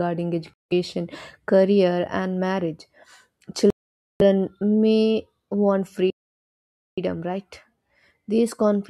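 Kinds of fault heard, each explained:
Bluetooth stall: Radio interference likely held up packets to the headphones, so their buffer emptied and output paused until resent data arrived. The speech drops to silence at 0.54 s for about 170 ms, and at 3.70 s for half a second, resuming on "may want".
playback stall: The player likely ran short of data or had its thread blocked, leaving the output silent until it caught up. Just after "may want", at 6.1 s, the speech cuts out mid-flow for about 870 ms before carrying on.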